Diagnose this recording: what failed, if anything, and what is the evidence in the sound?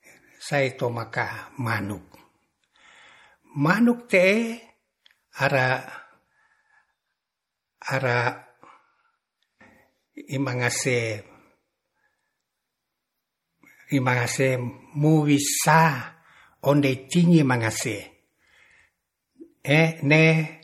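The codec stage failed: the speech was squeezed through likely MP3 compression at a starved bitrate, consistent with roughly 48 kbps. Throughout the clip nothing sounds above 17 kHz, and weak spectral lines flicker between frames, giving plainly audible watery swirl, chirpy sibilants and smeared consonant onsets.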